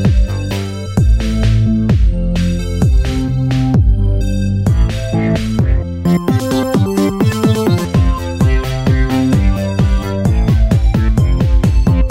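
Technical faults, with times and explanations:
6.05 to 7.85 s, audio read two samples at a time (double speed): the reader treated each pair of samples as one frame, so this stretch plays 2.0 times too fast and an octave high.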